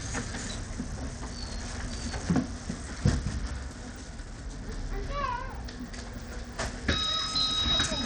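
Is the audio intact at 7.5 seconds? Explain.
No. At 7.5 seconds, as throughout the clip, the treble drops out and flickers while a gritty noise rides on the sound, likely from Bluetooth SBC compression at a bitrate around 80 kbps. Its few fixed sub-bands starve the top bands of bits. A plain low-pass would cut the highs steadily rather than letting them flicker.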